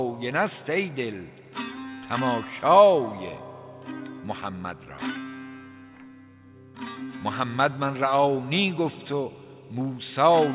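No technical faults can be heard anywhere in this clip. There is nothing in the sound to place on a timeline or trace back to a cause.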